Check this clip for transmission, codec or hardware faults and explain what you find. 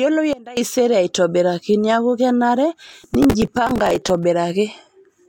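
Two faults stand out in the speech, one near the start and one toward the end.

From 0.33 to 0.57 s there's a sudden gain jump. The level drops by about 19 dB in a single step, with the background noise falling right along with the speech, then snaps back up. That hard edge with no fade suggests a gain setting applied without a ramp, likely a bit shift or a level change hitting the digital path mid-stream.

From 2.87 to 4.24 s you get processor overload crackle, a gritty, tearing texture riding on top of the speech for well over a second. The processor kept missing buffer deadlines, and each time it replayed a scrap of old audio instead of fresh samples, leaving a hard-edged discontinuity. The grain of the crackle fits very short buffers of around 3 ms, with something like fifty misses piling up before the load cleared.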